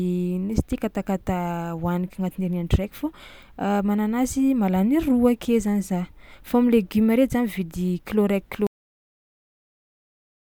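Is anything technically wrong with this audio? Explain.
Yes, there's a cut-off end. At 8.67 s the speech stops mid-sound and drops straight to digital silence for the remaining couple of seconds, no decay at all. The final buffers never got written or played, so the recording just ends where that data ran out.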